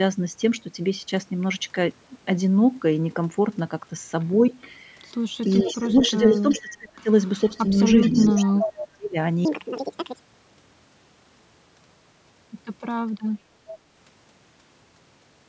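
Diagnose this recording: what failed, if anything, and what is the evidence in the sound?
A faint delayed copy of the speech trails itself by about 0.42 s in short scraps at 4.61–4.70 s and 13.69–13.76 s, and more strongly at 5.41–6.61 s and 7.39–8.86 s, up to about 10 dB below the speech. This is an echo leak in call processing, likely from a far-end loudspeaker whose echo canceller left residue that was sent back.

The speech dips and breaks up at 5.64–7.09 s and 7.51–9.17 s, losing up to about 30 dB for roughly a second in each span while the echo is present. This is speech suppressed in double talk, likely because the call's echo canceller, unable to separate talker from echo, attenuated both.

From 9.45 to 12.63 s the speech turns high and hurried, running 1.78 times too fast and about ten semitones sharp, with pitch and tempo shifting together. This is a section at the wrong speed, likely from an editing or playback stage resampling that stretch against the wrong clock.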